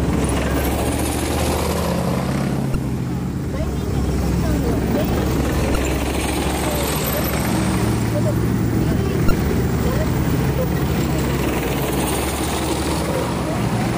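At 2.72–2.75 s, 5.72–5.76 s and 9.28–9.31 s, damaged data in a compressed stream makes the decoder lose frame sync, giving brief glitches.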